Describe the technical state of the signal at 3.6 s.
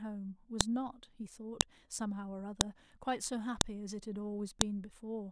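At 3.61 s there's a sharp, loud click: a file header played as audio. Somebody joined or streamed separate WAV pieces and left a header in place, so those few dozen bytes of metadata get read as sample values. That produces a brief snap that has nothing to do with the speech around it. The pieces look to be about one second long, and this click marks the start of one of them.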